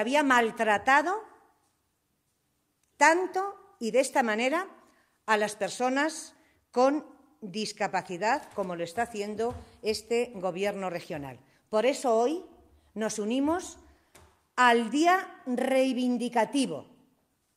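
Nothing stood out as a technical problem on listening to this audio.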